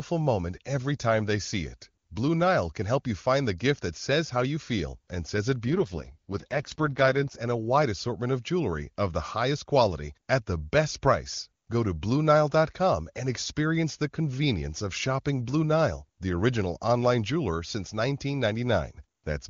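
Just after "feel and says it", from 5.67 to 7.36 s, an AMR rate drop hits the speech. The band stays wide and nothing cuts out. The voice turns rough, raspy and synthetic, which fits the AMR-WB codec falling from about 23.85 to 6.6 kbit/s.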